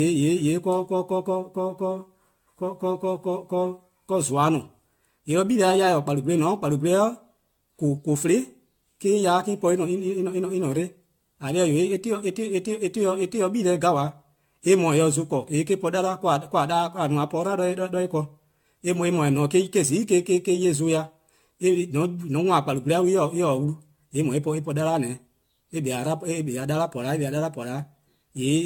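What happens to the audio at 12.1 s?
At 12.1 s the speech carries the generation loss heard through the whole clip: a swirly, hollow, smeared quality with softened consonant attacks. The likely cause is around ten successive lossy passes, consistent with AAC-LC near 96 kbit/s, each re-quantising on a shifted frame grid so the errors pile up. A spectrogram shows nothing above 17 kHz, with patchy holes and speckled noise between harmonics; the waveform's transients look rounded rather than sharp.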